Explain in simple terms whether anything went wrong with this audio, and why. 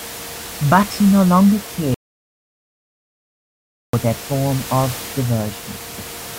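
Right after "he no longer", at 1.94 s, the speech cuts out to dead silence until 3.93 s, picking up again at "that form of". That's an audio dropout to silence. The input was likely lost briefly, so about two seconds of speech are gone, and even the room's background noise vanishes in the gap.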